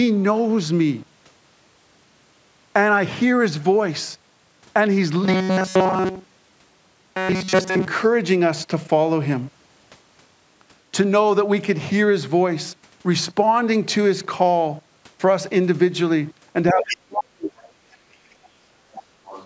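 From 5.24 to 7.87 s the speech takes on a robotic sound from repeated short buffers. It turns into a rigid, metallic buzz at 188 Hz. That pitch comes from a loop lasting about 5.3 ms, which fits a buffer of roughly that size being replayed. New audio was likely arriving too seldom. Through most of this stretch the same tiny slice repeats while the real audio is skipped. The speech still follows its rough shape.

At 16.71 s the other side's voice starts leaking through, until 16.97 s. It sits about 10 dB below the talker. The likely cause is loudspeaker sound reaching the microphone and escaping the echo canceller.

From 16.73 to 18.76 s the speech is suppressed in double talk. Both sides were talking together. The canceller likely could not tell the talker from the echo and turned everything down. The talker's level dips and breaks up over about two seconds. At its deepest the drop reaches about 40 dB.

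The other side's voice leaks through again at 18.92 to 19.03 s and from 19.25 s to the end. Each time it sits about 20 dB below the speech. These are faint fragments. They are likely more echo the canceller failed to remove.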